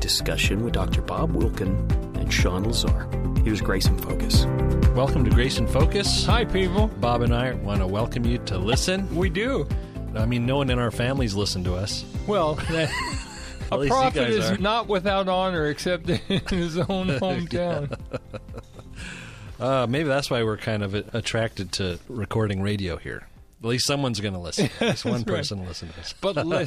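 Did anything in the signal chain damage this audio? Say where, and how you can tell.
Yes. At 8.72 to 8.74 s a corrupt frame was decoded in the codec stage: a single damaged frame produces a brief chirp or burst of noise peaking around -10 dBFS. Flipped bits in the compressed data made the decoder rebuild that frame with wrong gains and misplaced spectral energy.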